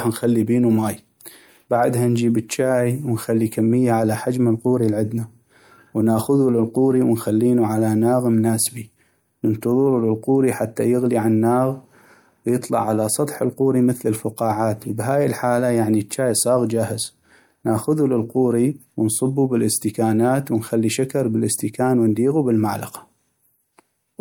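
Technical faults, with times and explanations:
10.76 s, pre-echo. A brief hiss, 13 ms long, comes just before "يغلي عالناغ". The codec spread its quantisation noise evenly across one block. The sharp onset sat late in that block. Its noise filled the quiet moment before it, smearing the attack.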